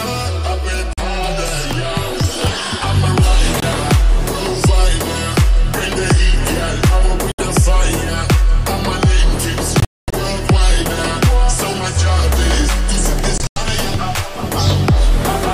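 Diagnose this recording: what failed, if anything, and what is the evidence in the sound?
The sound cuts to silence at 0.93–1.00 s, 3.60–3.64 s and 7.32–7.40 s. Broken patches follow at 9.80–10.14 s (longest hole about 0.23 s) and 13.38–13.58 s. Each time it resumes further along, as if it had kept playing. Hole lengths step in multiples of roughly 23 ms, which fits whole packets going missing. This is likely a Bluetooth dropout at the playback link, with late packets discarded and nothing concealing the gaps.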